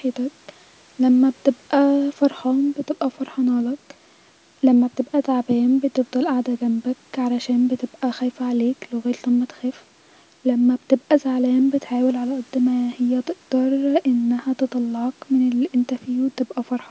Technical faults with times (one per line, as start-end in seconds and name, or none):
none